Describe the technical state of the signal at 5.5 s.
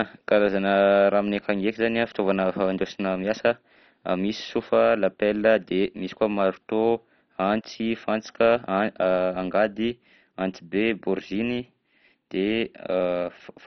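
At 5.5 s the speech carries the same damage as the whole clip: likely MP2 compression, pushed hard. Starved upper sub-bands are shut off so nothing gets above about 6.1 kHz, and the coarse survivors gurgle and grain, which fits a rate around 32 kbps.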